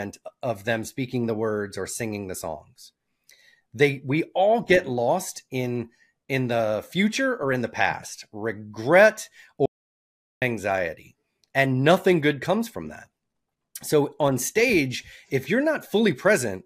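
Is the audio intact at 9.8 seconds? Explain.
No. An audio dropout to silence runs from 9.66 to 10.42 s, likely a lost input, so the sound stops dead for 0.76 s: a flat waveform and a blank spectrogram gap.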